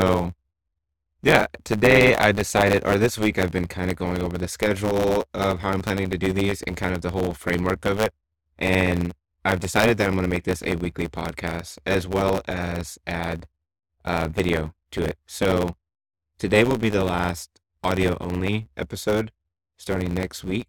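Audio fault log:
Throughout, block size mismatch (truncated): the speech carries a steady buzz at about 109 Hz and runs about 1.09 times fast, pitch roughly unchanged. One stage hands over bigger blocks than the next reads, so each block's tail gets chopped, clicking at the block rate and skipping ahead.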